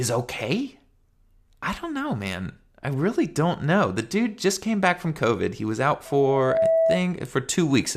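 Just after "was out", at 6.05 s, loudspeaker feedback squeal sets in. The microphone is hearing its own loudspeaker. At 655 Hz the loop gain passes one. That tone swells over about half a second to roughly 5 dB above the speech. It holds until 7.07 s.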